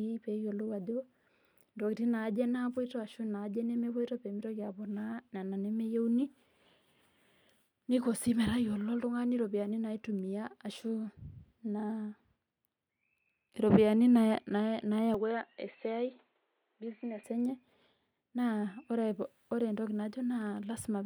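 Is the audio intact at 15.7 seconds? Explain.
No. From 15.14 to 17.24 s the speech turns dull and boxy, with nothing above 4.3 kHz, a drop of about 5 dB, and a faint new noise floor, with no gap at the change. This is likely an input switched to a poorer, narrower-band device.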